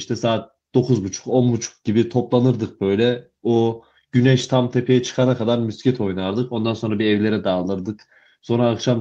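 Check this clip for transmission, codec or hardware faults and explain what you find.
No transmission, codec or hardware faults are audible anywhere in this speech recording.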